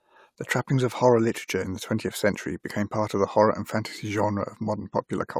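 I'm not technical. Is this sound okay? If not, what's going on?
Yes, this recording is in good technical shape, with nothing in the signal that would disturb someone listening to it.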